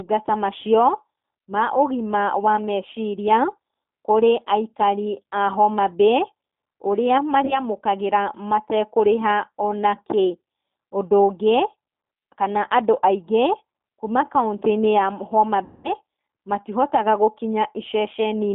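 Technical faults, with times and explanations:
Throughout: G.729 codec. The band runs from about 200 Hz to 3.6 kHz, and the sound has a rough, slightly synthetic texture that fits an 8 kbit/s G.729A coder. The coder rebuilds the sound from a vocal-tract filter, a pitch predictor and a few pulses per frame, so fine detail is discarded.
7.45–7.60 s: VoIP packet loss concealed by the speech codec. About 20 ms of audio is missing, which fits a single lost packet. The decoder extrapolates from its last pitch and filter state, and because each frame builds on the one before, the sound stays weak and distorted for roughly 150 ms.
15.64–15.92 s: VoIP packet loss concealed by the speech codec. About 200 ms is lost, which suggests around ten consecutive packets. The concealment stretches the last frame into a buzzy tone or coloured noise that fades, and the sound takes a while to recover cleanly.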